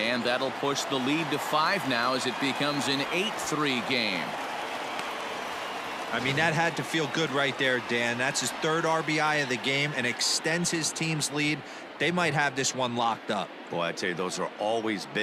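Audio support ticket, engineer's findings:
No transport or processing faults found on listening, and the signal chain showed no dropouts, glitches or discontinuities across the recording.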